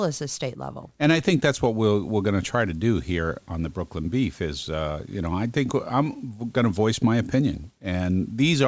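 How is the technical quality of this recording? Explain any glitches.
The recording has one fault, and it runs the whole way through.

Aliasing, throughout: the speech was resampled downward without a low-pass filter first, which fits a drop from 48 kHz to 16 kHz. Energy above the 8 kHz fold point mirrors back into the band as unrelated tones, roughly 25 dB below the speech, making sibilants sound gritty and metallic.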